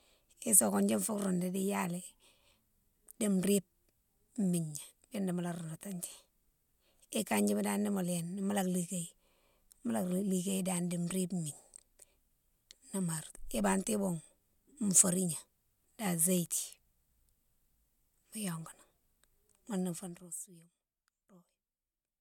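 A speech recording in which, from 19.98 to 20.38 s, a fine ticking buzz rides on the audio as the level falls by roughly 20 dB. That is zipper noise: the gain moves in small unsmoothed steps, a few hundred per second, each leaving a tiny click.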